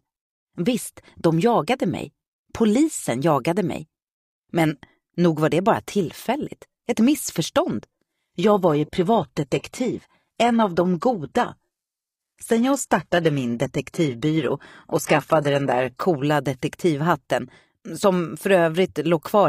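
From 7.99 to 15.99 s an adaptive stream at a lower bitrate takes over: treble vanishes above 12.3 kHz, switching abruptly without the silent gap that rebuffering would leave.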